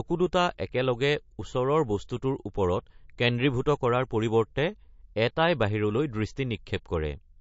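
Throughout, this looks like low-bitrate audio saved at a high bitrate: the speech was likely squeezed through a low-rate MP3 encode, around 38 kbit/s, then re-encoded at 320 kbit/s. The larger file restores nothing. Nothing sounds above 7.6 kHz, and the earlier artefacts and dullness remain.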